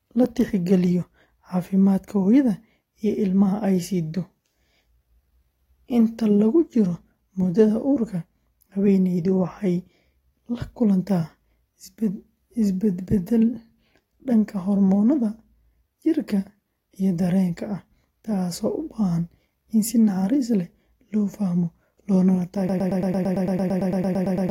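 At 22.69 s the speech locks into a broken-record loop that runs to the end of the clip: a 112 ms fragment repeats back to back, sixteen times, so the rest of the speech never arrives. The likely cause is a player or stream that stalled and kept resending its last buffered piece. Unlike an echo, each repeat is identical and does not fade, and unlike a dropout there is no silence, only the same fragment repeating over and over.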